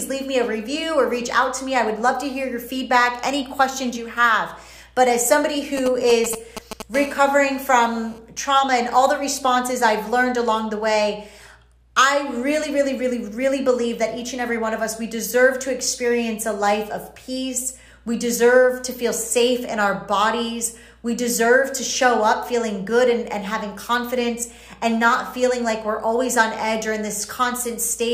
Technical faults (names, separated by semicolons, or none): GSM signalling bursts; GSM phone buzz